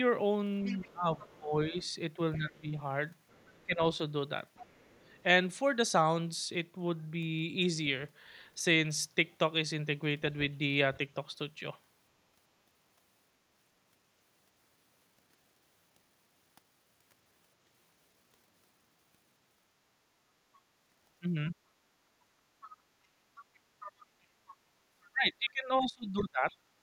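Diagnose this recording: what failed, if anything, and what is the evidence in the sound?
A faint second voice runs under the talker from 0.65 to 5.23 s, about 25 dB down, and again from 21.49 to 26.57 s, about 20 dB down. This is the other side's voice leaking through, likely loudspeaker playback that the call-processing echo canceller left partly uncancelled in the microphone signal.

The talker's own speech dips from 0.72 to 3.82 s, falling by roughly 20 dB at worst, and from 24.18 to 26.48 s, by roughly 30 dB, for around a second and a half each time. This is speech suppressed in double talk, likely the echo canceller attenuating everything while both sides spoke.

The room sound drops out briefly at 24.72 to 24.82 s, by about 8 dB, then returns, and at 26.77 to 26.82 s, by about 9 dB. This is background gated by the echo canceller: during loudspeaker activity the call-processing stage clamped the microphone hard, taking the ambience down with it.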